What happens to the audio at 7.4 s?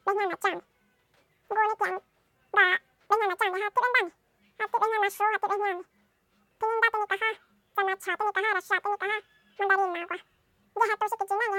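At 7.4 s the speech is still affected by audio read two samples at a time (double speed), a fault that runs from start to finish rather than beginning there. The reader is treating each pair of samples as a single frame, as if the stream held two channels or samples twice as wide, so it plays through twice as fast. The speech is rushed and pitched a full 12 semitones up.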